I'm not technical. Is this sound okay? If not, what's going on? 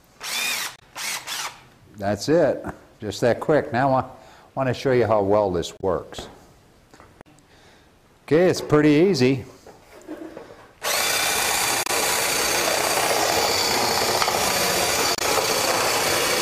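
No. Parts of the compressed audio data were damaged, a problem called damaged data in a compressed stream. When the player reaches those spots, it can't read the data correctly, loses its place, and has to search forward to pick up the audio again. Each time, you hear a brief chirp, squawk or blip lasting under a tenth of a second, at about 0.75, 5.77, 11.83 and 15.15 seconds.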